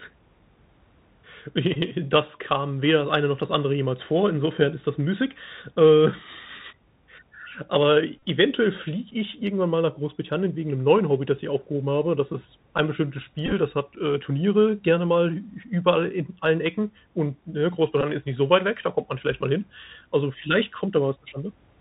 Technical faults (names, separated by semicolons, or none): Bluetooth CVSD headset codec; Bluetooth headset packet repeated